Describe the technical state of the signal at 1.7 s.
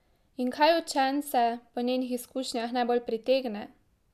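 At 1.7 s the speech signal is intact, with no audible technical fault.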